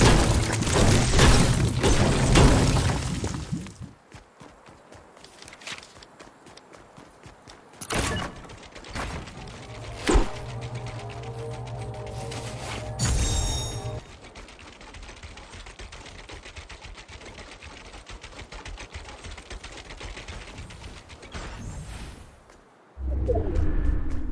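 No technical faults are audible anywhere in the clip.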